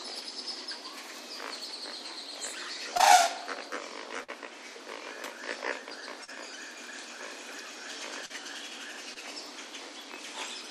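At 2.97 to 3.01 s there is a short concealed packet loss. About 20 ms never arrived in time. The receiver extended the preceding sound and then blended back, leaving a brief smear.

At 4.23 to 4.30 s a burst of packet loss follows. Roughly 40 ms went missing. The receiver stretched the last sound for about 47 ms, fading it out. Playback then resumes further on, with a small piece of the audio gone.

Three more short concealed packet losses come at 6.24 to 6.30 s, 8.26 to 8.32 s and 9.14 to 9.18 s. The first two each hide about 40 ms, and the last about 20 ms. Each sounds like a quick wobble.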